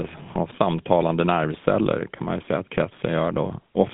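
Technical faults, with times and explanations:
Throughout, GSM full-rate codec: the speech has that unmistakable buzzy, gravelly grain, plainly audible the whole way, with a sound that fits the 13 kbps full-rate mode. The codec rebuilds the vocal tract as a filter and excites it with a sparse, regular pulse train, so the natural breathiness gets replaced by a rough, mechanical texture. The band is narrow too, roughly 150 Hz to 3.5 kHz, leaving everything thin and boxy with no air on top.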